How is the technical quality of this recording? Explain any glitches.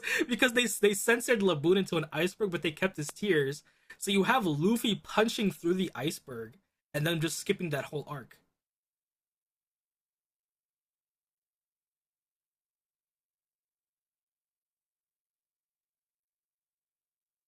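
The recording has one audible glitch, a single loud pop in the speech.

Loud pop, 3.09 to 3.11 s: a brief electrical pulse, likely from a plug, switch, static discharge or driver glitch, lands on the signal. It is heard as one sharp pop, peaking roughly 10 dB above the speech, which continues underneath.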